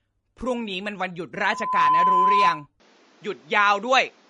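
Speech, most likely passed through MP3 compression at a low bitrate in the region of 40 kbps, with the encoder stripping weak frequency lines and cutting the treble; nothing remains above 10.6 kHz, and the watery, swirly codec damage is plainly audible from start to finish. At 1.36 s a microphone begins picking up the loudspeaker it feeds, and the loop's gain exceeds one at 1 kHz, so a loudspeaker feedback squeal swells over roughly half a second into a steady tone about 5 dB above the speech, lasting until 2.67 s. From 2.8 s to the end the input has likely switched to a poorer device: the band narrows to nothing above 7.6 kHz, so the sound turns duller, and a new background noise appears around 35 dB below the speech, with no gap at the switch and no real change in level.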